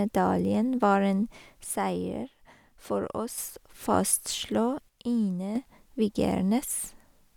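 Right after "var en", from 1.64 to 3.38 s, and again from 4.88 to 5.56 s, the speech drops abruptly by about 6 dB, likely one channel dropping out before the mono sum.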